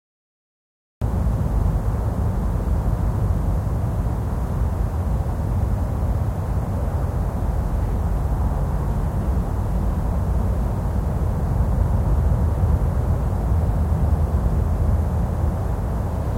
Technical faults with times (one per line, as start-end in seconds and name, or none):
0.00-1.02 cut-off start